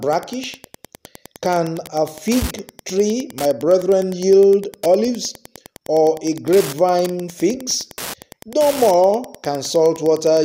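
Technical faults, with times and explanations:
Throughout, Wi-Fi interference: steady ticking about ten times a second, roughly 20 dB below the sound. The audio circuit rectifies a nearby radio's 102.4 ms beacon.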